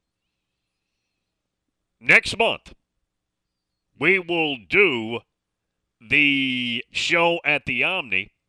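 Nothing here snags the ear at any point: the speech runs along without a single technical fault to pick out.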